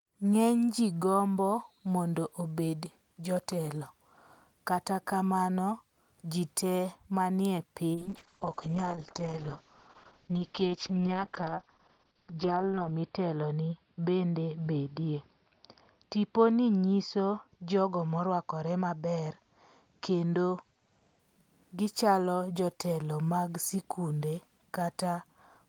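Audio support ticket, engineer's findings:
Call bitrate drop, 7.97–21.25 s. Speech turns rough and watery, top end muffled as audio bandwidth narrows from 20 kHz to 6 kHz. Encoder starved after bandwidth estimate fell; coarse quantisation consistent with a drop from about 32 to about 7 kbps, worst for 5 s.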